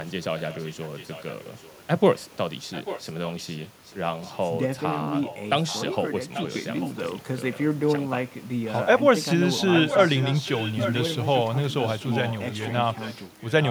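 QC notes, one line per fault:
0.04–1.82, 2.72–4.37, 5.22–5.78, 6.34–7.12, 7.53–7.57, 9.6–11.35 and 11.82–13.7 s, echo leak: a fainter copy of the speech returns 0.84 s after the original, from about 25 dB down to about 5 dB below it, loudest at 9.6–11.35 s. The likely cause is a far-end loudspeaker whose echo canceller let part of the pickup through. The copy is a distinct delayed repeat with a fixed lag, not the close, smeared tail of room reverberation.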